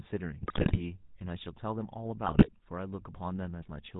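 GSM full-rate codec coding runs through the whole recording: the speech is rebuilt from a vocal-tract model driven by sparse pulses, giving a buzzy, gravelly roughness and nothing above 4 kHz, consistent with a 13 kbps GSM full-rate link.

GSM bit errors strike from 0.42 to 0.80 s and again from 2.26 to 2.50 s. Corrupted filter, pitch and gain values warp the spectrum and jolt the level frame by frame, so the speech breaks into squawks, pops and gargling, which points to a weak radio link with several percent of bits flipped.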